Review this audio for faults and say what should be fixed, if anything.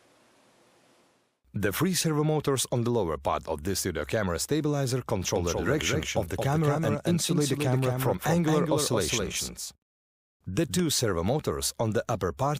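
A doubled audio track runs from 5.36 s to 10.80 s. A full-band copy trails by about 200 ms, roughly 5 dB quieter. It has no decay and starts and stops abruptly. The likely cause is a slower second capture path or a misaligned edit. Route and record each source only once.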